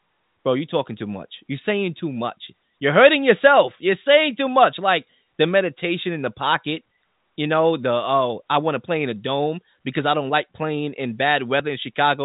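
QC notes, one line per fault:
No faults heard anywhere in this speech clip.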